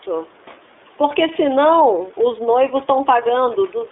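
Speech passes through the iLBC codec for its whole length, with only about 300 Hz to 3.6 kHz surviving. A plain telephone band-limit would sound clean, but here each frame's excitation is coded independently, giving a plainly rough, synthetic grain that fits 30 ms frames at 13.33 kbps.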